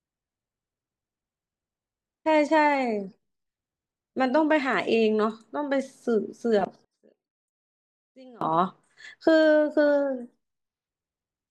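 From 6.85 to 8.41 s the speech almost disappears, dropping by about 28 dB and leaving only a faint residue. The likely cause is one channel inverted: with one stereo side's polarity reversed, the centred voice cancels when the channels are summed to mono, leaving just their small difference. On a waveform the envelope collapses to a sliver for that span, and a spectrogram shows the energy nearly gone across the band, with only weak traces remaining.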